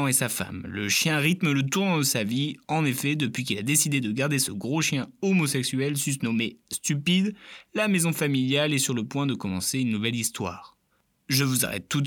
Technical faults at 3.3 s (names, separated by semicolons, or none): none